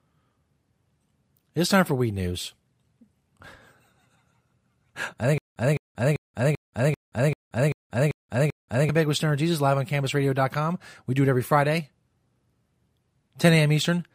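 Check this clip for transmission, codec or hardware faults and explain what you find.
One fault is present: a stutter with silent gaps from 5.38 s to 8.89 s. The playback or stream likely stalled repeatedly, and on each retry the player replayed its last buffered fragment before running dry. A 209 ms burst of the speech returns nine times at a steady 390 ms pace, each copy followed by about 182 ms of dead digital silence. The speech that should have filled those 3.5 seconds never plays.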